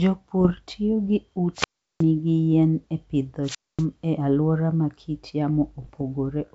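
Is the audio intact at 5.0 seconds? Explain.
Yes, the audio is intact at 5.0 seconds, where the speech carries only the light upper-band hiss of G.722 wideband telephone coding at 64 kbit/s, with no fault.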